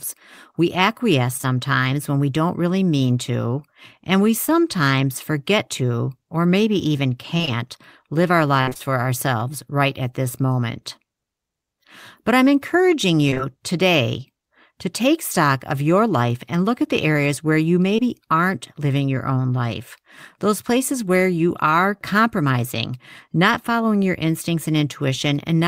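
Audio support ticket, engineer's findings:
Short concealed packet loss. Packets did not reach the decoder in time, and the receiver's concealment extended the preceding audio across each hole, then blended back. Each hole was about 20 ms. Brief smears at 1.37–1.45 s (two back-to-back holes), 4.45–4.49 s and 17.96–18.00 s.

Repeated packet loss (robotic sound). Packets were dropped or late in quick succession, with each patch followed closely by the next. The result is choppy, robotic speech with pieces missing. At 7.37–7.49 s there were 3 gaps, about half the span concealed. At 8.61–8.82 s there were 4 gaps, about 62% concealed, longest 62 ms. At 13.30–13.41 s there were 3 gaps, about 45% concealed.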